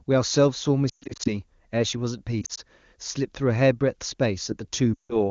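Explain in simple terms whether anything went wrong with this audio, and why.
Lost AMR speech frames cause three brief breakups, at 0.89–1.29 s, 2.42–2.60 s and 4.94–5.16 s. Radio errors corrupted short chunks of the wideband call. The decoder filled those gaps by repeating the last good sound and fading it, so the speech smears and drops out before returning rough.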